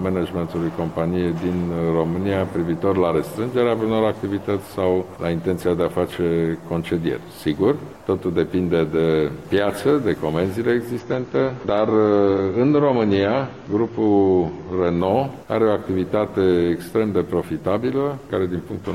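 From 10.99 to 14.99 s an adaptive stream drops to a lower bitrate, so nothing above 7 kHz remains and artefacts rise, which fits roughly 24 kbit/s AAC.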